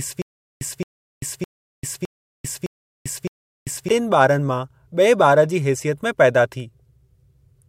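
A speech recording that opens in a stutter with silent gaps, already under way at 0 s and lasting to 3.89 s. A 0.22 s burst of sound repeats six times, each followed by about 0.39 s of dead digital silence, giving an even 0.61 s cycle. Unlike ordinary dropouts, the same fragment returns each time rather than fresh audio resuming. This points to a playback or stream stall, likely with a retry replaying its last buffer before running empty.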